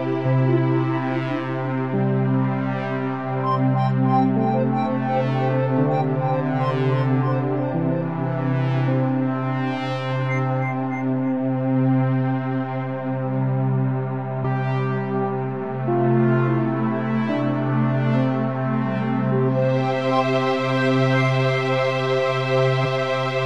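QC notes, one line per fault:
14.40–14.45 s, damaged data in a compressed stream: corrupted bytes make the decoder misread frames and lose sync while it hunts for the next header, leaving a short glitch.
22.81–22.86 s, damaged data in a compressed stream: another corrupted section breaks frame decoding until sync returns, producing a brief glitch lasting about 60 ms.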